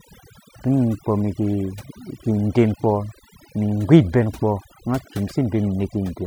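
From start to finish the speech shows overdone noise removal. A noise reduction process set far too aggressively has cut individual frequency bands deep whenever their level sat close to its noise estimate, and the softer components of the speech were removed along with the noise. Between phrases the background drops to near silence scattered with brief tonal twinkles.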